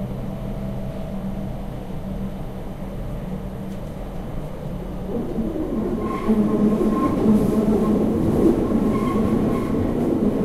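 Nothing in the recording stood out as a technical problem on listening.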